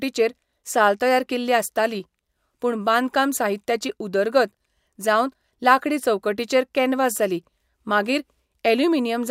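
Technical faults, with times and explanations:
No technical faults are audible anywhere in this recording.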